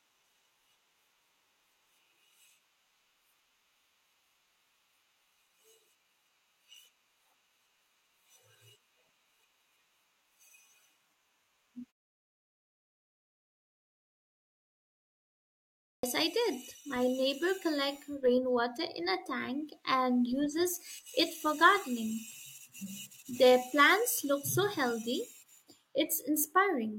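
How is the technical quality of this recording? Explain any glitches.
The recording has one clear glitch, a clipped start after a pause. At 15.63 s speech bursts abruptly out of silence, missing about 0.40 s until 16.03 s, because the output device slept during the preceding 3.8 s pause and was slow to wake.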